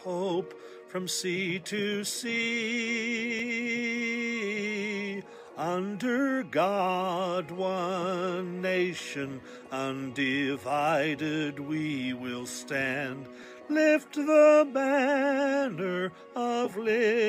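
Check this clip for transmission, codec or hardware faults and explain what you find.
One fault type is present: a repeated buffer at 3.39 s, 8.99 s and 13.43 s. Audio arrived late, so the output replayed its last 5 ms block, once at 3.39 s and twice at the others. Each repeat is heard as a click or brief buzz.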